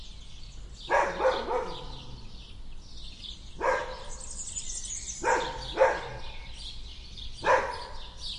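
Nothing in these sounds gives away a technical problem anywhere along the way, so there's nothing to flag here.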